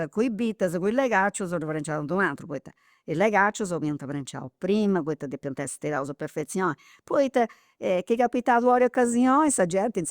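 No technical faults can be heard anywhere in the speech; the signal stays continuous and stable throughout.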